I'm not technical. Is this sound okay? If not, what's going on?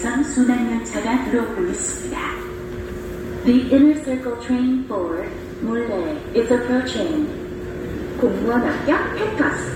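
Yes, nothing stood out as wrong when listening to this sound.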